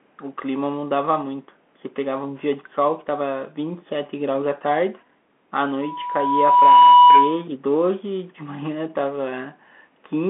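From the start, the speech carries the sound of a Bluetooth CVSD headset codec, consistent with a 64 kbit/s link. The band runs only from about 200 Hz to 3.4 kHz. The one-bit delta coder's adaptive step lags loud, bright passages, leaving sibilants scratchy and a grainy hiss beneath the speech.

From 5.81 s to 7.44 s, a loudspeaker feedback squeal appears. The microphone is picking up its own loudspeaker, and the loop gain exceeds unity at 982 Hz. That single tone swells over roughly a second to about 10 dB above the speech, then ends.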